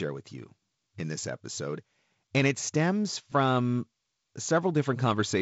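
This speech recording has no technical fault. It has passed through G.722 wideband telephone coding, audible as a bandwidth that ends near 7.7 kHz and a light coding grain whose slightly noisier low band fits the codec's 48 kbit/s mode.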